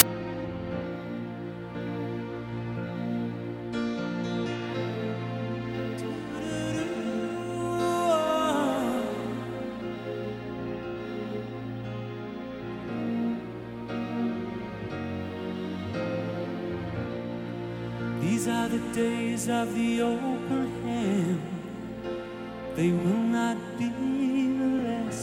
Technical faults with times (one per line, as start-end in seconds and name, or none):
0.00 file tags played as audio